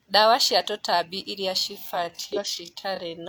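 From 1.55 s to the end, the speech slows abruptly to about 0.65 times its pace while the pitch stays where it was. That pairing marks a time-stretched section, likely the result of software fitting the audio to a longer slot by repeating short slices of the waveform. A tape or playback-speed error would instead drop the pitch along with the pace.

Inside that slowed stretch, from 2.33 to 2.38 s, a brief glitch cuts in. This is damaged data in a compressed stream. Corrupted bytes made the decoder misread its frames and lose sync until it found the next frame header.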